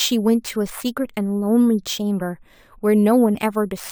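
Throughout the speech, imaging from sample-and-hold upsampling adds a bright metallic fizz between 11 kHz and 22 kHz, about 23 dB below the signal. This fits a rate near 22 kHz raised to 44.1 kHz by repeating samples without smoothing. Unlike steady hiss, the fizz rises and falls with the speech, and it moves opposite to the pitch.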